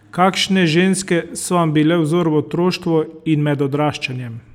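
A short piece of speech, and nothing technically wrong turns up anywhere in it.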